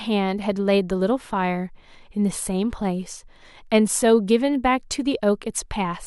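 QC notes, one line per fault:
No audible faults found in the speech.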